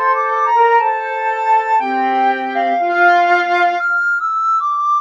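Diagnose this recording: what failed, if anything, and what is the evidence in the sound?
The call-processing stage left a speech-tuned noise suppressor applied to music or sounds throughout. It treats sustained parts and tails as noise and pulls them down by roughly 5 dB while attacks pass, so the level pumps. A spectrogram shows held partials and decays fading unevenly between onsets.

From 0.99 to 1.24 s comes sound cut by the noise suppressor. The suppressor judged this stretch to be noise and lowered it by about 6 dB, more than the surrounding material, for around a third of a second. The waveform shows a shallow dip, and the spectrogram a dimmed band.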